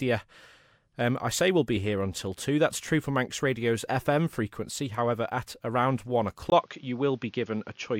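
A speech recording that turns dull and boxy at 6.5 s and stays that way to the end, with a brief gap of about 20 ms at the change, nothing above 6.8 kHz, a new noise floor roughly 40 dB below the speech, and level roughly unchanged. The input likely switched to a poorer device, whose narrower band and own noise replace the original microphone's sound.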